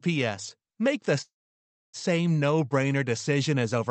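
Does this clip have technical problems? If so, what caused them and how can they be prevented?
Yes. A call audio freeze runs from 1.21 to 1.96 s in this speech. The likely cause is packets held up in transit until the jitter buffer ran dry. The receiver stretched the last sound into a brief fading fill, then sat silent for about 0.64 s before the speech resumed where it had stopped. Nothing is lost, but roughly 0.72 s of gap is inserted. The Opus path's dull top end, cut near 8 kHz, continues through this. Prevent it by stabilising the network route and allowing the jitter buffer more headroom.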